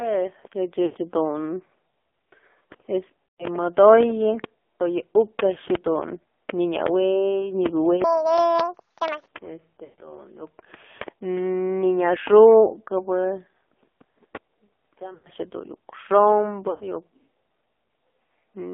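The whole recording passes through the AMR narrowband mobile codec. The speech is boxed into roughly 250 Hz to 3.5 kHz and sounds heavily buzzy and synthetic, which points to a low mode near 5.9 kbps. Unlike plain band-limiting, this damage comes from a vocal-tract model rebuilding the voice rather than from simple filtering.

Lost AMR speech frames appear at 0.86 to 0.97 s, 3.26 to 3.56 s, 9.84 to 9.99 s, 15.14 to 15.29 s and 16.70 to 16.83 s. Each gap lasts about 80 to 140 ms, which fits four to seven missing 20 ms frames. The decoder stretches the last good sound with falling gain, so each gap is a smeared, drawn-out sound fading toward silence rather than the hard click of a dropout.

From 8.04 to 9.28 s there is a section at the wrong speed. It plays at 1.79 times normal, with pitch close to ten semitones higher. Speed and pitch rise together, which separates it from a pitch-shift alone, and the likely cause is playback against the wrong clock.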